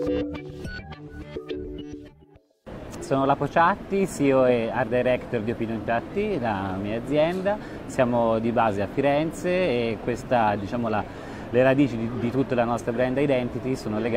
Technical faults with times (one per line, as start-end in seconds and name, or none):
5.81-5.87 AAC frame loss with concealment